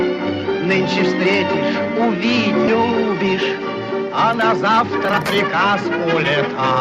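At 2.67 s there is a skip ahead: roughly 0.7 s of audio is missing, and playback jumps straight from the material before the cut to the material after it with no gap inserted. A stretch was discarded while later audio was already queued, for example by a jitter buffer shedding its excess, so the output delay drops by the same amount. The result is an abrupt splice where the sound jumps forward in time.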